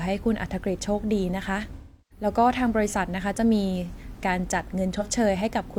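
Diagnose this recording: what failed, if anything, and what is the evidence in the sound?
The codec stage failed, with AAC frame loss with concealment in two places. From 1.76 to 2.25 s the speech turns smeared and phasey, then sinks toward silence before fading back in. About 0.34 s of audio is missing there, which fits eight lost frames. From 4.94 to 5.07 s a brief noisy patch covers about 43 ms, which fits a single lost frame. In both gaps the decoder rebuilt sound from the last good spectrum, and the longer gap faded as it went on.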